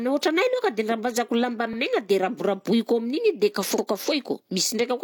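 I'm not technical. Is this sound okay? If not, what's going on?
No. Overlapping chunks: at 1.73 s, just after "rambazako lamba", and again at 3.78 s, a 50 ms piece replays where 2-second blocks join, causing a brief stutter.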